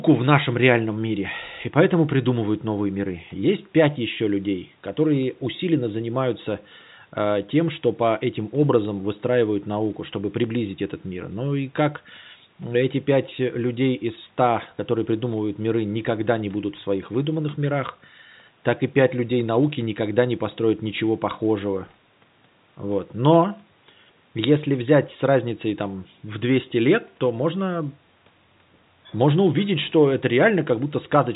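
No technical faults occur anywhere in this clip, so there is nothing to place in time order.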